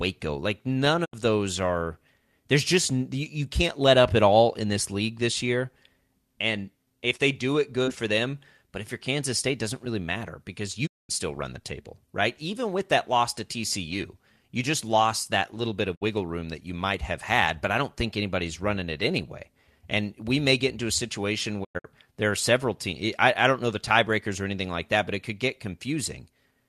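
Speech clip with a digital broadcast dropout: the receiver lost good frames and muted, fading out over about 20 ms, at 1.04 s after "like none", 10.85 s after "doesn't really matter because", 15.94 s, and 21.63 s after "get into a situation". Those last holes are scattered.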